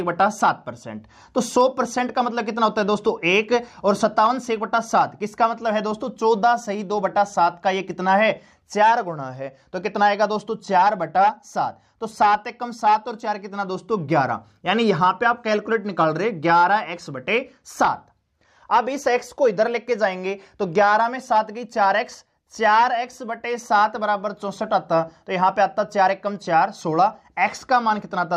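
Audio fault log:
No faults are heard in this audio. Nothing in it calls for an entry in this log.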